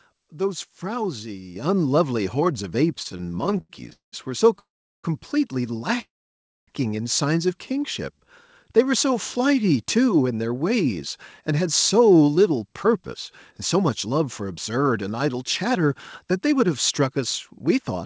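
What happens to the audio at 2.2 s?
Nothing goes wrong at 2.2 s: the speech carries straight through that moment, with only the steady band limit of the call path, which passes nothing above 8 kHz, as it does throughout.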